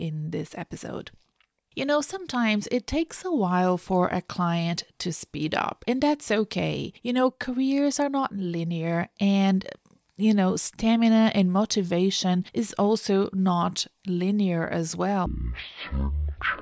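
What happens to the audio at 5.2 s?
At 5.2 s the speech carries straight through without any dropout, click, distortion or other disturbance, so the audio is intact at that moment.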